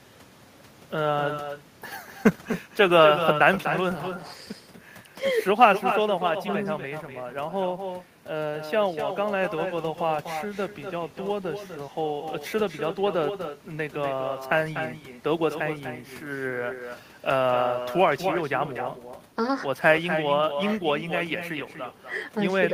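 From the start to the end of the clip, the speech carries an echo with no canceller. A loudspeaker at the far end feeds the microphone, and nothing subtracts it. Each phrase returns about a third of a second later, about 8 dB quieter and thinner.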